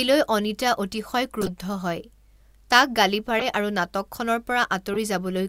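Corrupt frame decoded: bit-damaged compressed frames were decoded anyway, putting energy at the wrong frequencies and causing brief glitches, with error peaks around -15 dBFS, in the speech at 1.41–1.50, 3.39–3.44 and 4.94–4.98 s.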